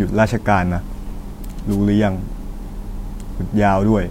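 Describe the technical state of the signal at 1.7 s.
At 1.7 s the speech is hit by a wireless microphone noise hit, running from 1.70 to 1.77 s. The analogue FM radio link fades as reflected paths cancel, receiver noise rises through the gap, and a brief swish of static is heard.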